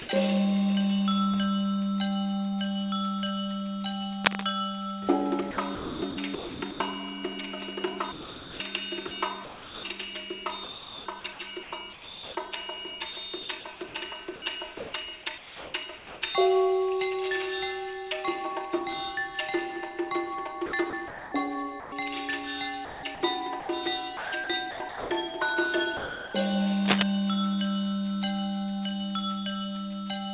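At 0.02 to 0.08 s, the opening 50 ms gives way to steady synthetic hiss. This is sound dropped by the voice detector: the sender likely judged the start to be background and stopped transmitting, so the receiver filled the gap with comfort noise.

From 4.25 to 4.49 s, a dense, uneven rustling sits over the sound at roughly the same level as the signal. This is cable scratch noise, likely from a worn cable or connector being moved, which makes its contact resistance fluctuate rapidly.

Across 5.51–6.80, 8.12–9.83, 10.64–16.22, 20.66–21.92 and 22.85–25.10 s, the sound turns choppy. This is sound chopped by the voice detector. The sender likely kept toggling transmission, replacing quieter portions with comfort noise. About 1.9 s is lost in the longest stretch.

At 25.97 to 26.33 s, 360 ms of sound again drops out to comfort noise, the same voice-detector dropout as at the start.

At 26.85 to 27.03 s, a second burst of cable scratch noise is heard, this time about 5 dB above the signal.

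All of this arrives through a call path that carries nothing above 4 kHz, consistent with G.711 telephone coding.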